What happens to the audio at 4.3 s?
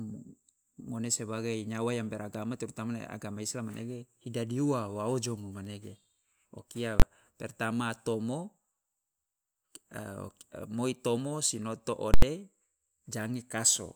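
Nothing goes wrong at 4.3 s: the speech carries on intact through that moment, with no dropout, click, distortion or other audible fault.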